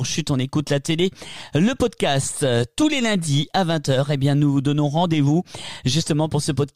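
No technical faults can be heard anywhere in the signal.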